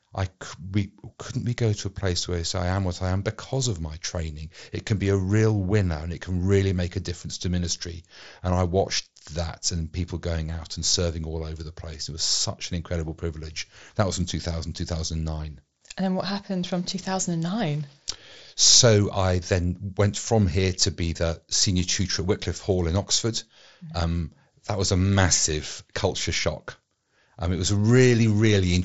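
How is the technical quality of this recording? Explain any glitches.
There aren't any glitches to speak of here; the speech sounds like it came over a Bluetooth headset using the mSBC codec, so the top end stops at about 7.7 kHz, which is simply how that wideband headset link carries sound.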